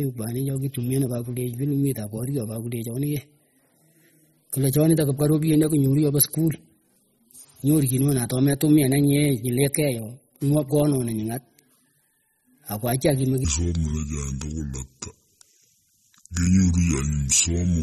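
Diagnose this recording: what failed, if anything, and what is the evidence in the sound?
Codec stage: the speech carries plainly audible MP3 compression throughout, watery and swirly, with nothing above 13.9 kHz, which fits a bitrate around 32 kbps. A spectrogram shows a hard ceiling at 13.9 kHz and flickering gaps where weak high bands drop out between frames.

Playback or editing stage: from 13.45 s to the end, a section at the wrong speed runs at 0.614 times normal, so the speech turns deep and slow, about ten semitones low, likely from resampling against the wrong clock. A spectrogram shows the harmonics squeezed downward, and the waveform looks stretched.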